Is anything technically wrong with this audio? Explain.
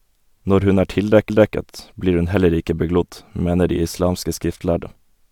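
Yes, there is a CD skip at 1.29 s. The laser jumped tracks, so the speech briefly mutes with a tick and resumes elsewhere. The waveform shows a near-silent gap of a few milliseconds, and the spectrogram shows a thin vertical click with a discontinuity on either side.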